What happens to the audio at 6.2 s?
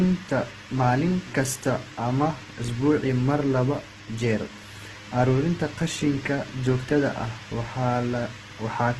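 Opus compression is present at 6.2 s, as it is throughout the clip. Nothing is heard above 12.1 kHz, and the speech sounds rough and grainy. This likely comes from heavy Opus coding in its music mode, which fits a starved bitrate near 12 kbps.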